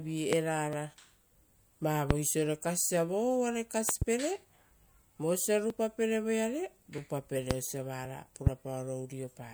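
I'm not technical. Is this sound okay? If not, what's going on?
No. There are loud pops, most likely from a sudden electrical jolt, like a plug, switch or static, that puts sharp thumps on top of the speech at 0.33, 2.11, 3.89 to 4.04 (two in a row), 7.51 and 8.47 seconds.

There are also dropped buffers (overruns), likely because the computer fell behind and lost tiny pieces of audio. This causes a small skip at 0.73 and 5.70 seconds.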